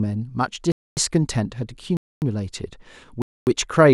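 Speech with a gap between chunks: 250 ms silences at 0.72–0.97 s, 1.97–2.22 s and 3.22–3.47 s, inserted after every 1 s chunk of sound.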